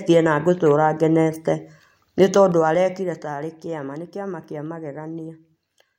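A speech clip with zipper noise from 2.4 to 3.4 s, where the level drops by roughly 15 dB in hard 3 dB steps, about four a second, instead of gliding down. Each abrupt gain jump puts a small click on the signal, so the fade ticks audibly while it moves. On the waveform the envelope descends as a staircase, and a spectrogram shows faint vertical broadband lines at each step.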